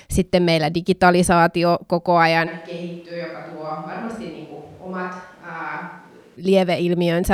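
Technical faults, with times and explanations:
2.49–6.35 s, switch to a distant microphone: just after "meillä digitalisaatio koko", the speech abruptly turns roomy and hollow, thinner in the bass, roughly 10 dB quieter, with room noise about 25 dB below it, likely because the close microphone dropped out and a far one took over.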